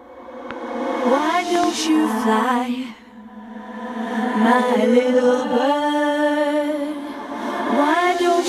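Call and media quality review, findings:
Loud pop, 0.51–0.53 s: likely a voltage step or pulse entering the analogue chain, from a plug, switch, static discharge or driver glitch. Downstream stages shape it into a sharp single pop, about 10 dB above the programme level, with the sound continuing underneath.

Loud pop, 1.55–1.66 s: likely same mechanism, two pulses in quick succession, heard as a double pop or thump, again about 10 dB above the signal, sound carrying on beneath.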